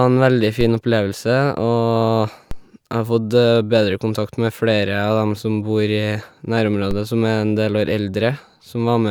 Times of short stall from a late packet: none

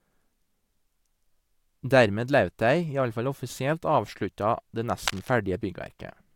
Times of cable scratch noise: 5.07-5.34

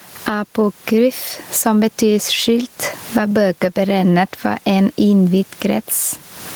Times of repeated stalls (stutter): none

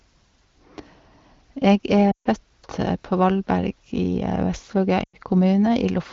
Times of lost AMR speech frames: 2.11-2.27, 5.03-5.16

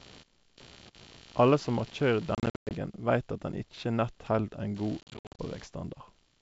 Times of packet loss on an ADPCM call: 2.35-2.72, 5.01-5.41

